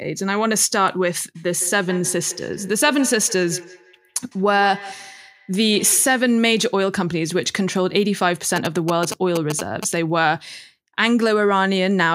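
It's a speech clip with two separate problems. From 1.35 to 6.3 s there's feedback echo between two devices: each word comes back roughly every 150 ms, thin and a bit ringy, peaking at about 16 dB below the speech. That happens when two devices on the same call sit in one room. One plays the other's audio, the second mic picks it up again, and neither echo canceller touches sound played by the other device. Then from 8.56 to 9.85 s you get GSM signalling bursts, the galloping dit-dit-dit of short buzzes at 217 Hz, sitting around 5 dB below the speech. A 2G phone nearby is sending short groups of radio bursts as it signals to the network, and the audio circuitry rectifies that RF into the audible pattern.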